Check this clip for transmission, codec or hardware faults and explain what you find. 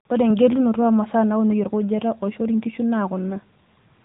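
The speech carries AMR narrowband mobile codec damage throughout. Nothing passes above about 3.8 kHz, and the vocal-tract model rebuilds each 5 ms from a few pulses, leaving a plainly buzzy, synthetic edge that fits a mid-rate mode near 10 kbps.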